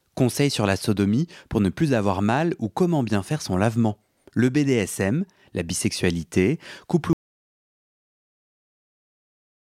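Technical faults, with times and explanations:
7.13 s to end: audio dropout to silence. After "la bisexualité couple" the speech cuts to silence with no room tone, unlike a pause, likely from lost input.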